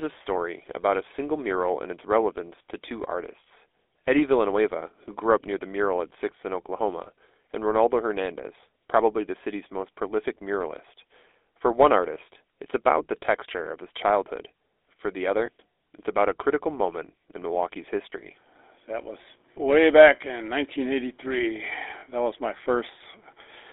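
From start to finish the speech carries the buzzy, gravelly texture of the GSM full-rate codec. That damage is plainly audible and consistent with 13 kbps full-rate coding. The codec rebuilds the voice from a vocal-tract model excited by a sparse, regularly spaced pulse train, which gives the roughness. The band is confined to roughly 300 Hz to 3.6 kHz, so the sound lacks low body and high-frequency air.

Lost GSM frames cause brief disturbances at 7.04–7.08 s, 13.26–13.29 s, 15.46–15.49 s, 18.10–18.13 s and 22.00–22.04 s. Each gap is about 20 ms, which points to one missing frame. The decoder fills it by repeating the previous frame's parameters. The result is a short metallic, ringing smear in place of the missing sound.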